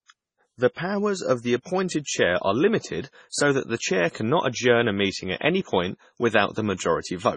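MP3 compression runs through the whole clip, and it is likely what causes the heavy damage heard. The encoder was short of bits, which fits a rate around 24 kbps. It removed everything above 10.3 kHz, so the treble is dull, and it dropped weak frequency lines that flicker in and out between frames. The speech sounds watery and swirly, with metallic chirps on sibilants and smeared onsets.

Pre-echo appears from 3.30 to 3.32 s. A sharp attack fell late in a transform block, and the codec spread that block's quantisation noise across its whole length. The noise, sized for the loud attack, filled the quiet 29 ms before it. A brief hiss therefore comes before the onset, and the attack itself sounds soft and smeared.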